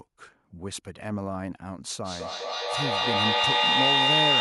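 Two devices on the same speech call create a feedback echo between them from 2.04 s to the end: each word returns roughly every fifth of a second and builds to about 7 dB above the speech.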